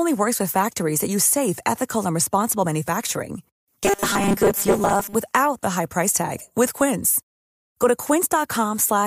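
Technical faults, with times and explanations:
3.84–5.15 s robotic sound from repeated short buffers: speech turns into a rigid metallic 200 Hz buzz, likely from most of the audio being replaced by repeats of a 5 ms buffer. A steady imposed pitch, not silent gaps, sets it apart from dropouts.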